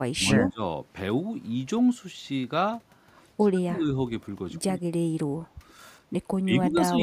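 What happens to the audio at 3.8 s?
At 3.8 s the speech is suppressed in double talk from 3.52 to 3.85 s, dropping roughly 25 dB, likely because the echo canceller could not separate this side's talker from the overlapping loudspeaker echo and turned both down.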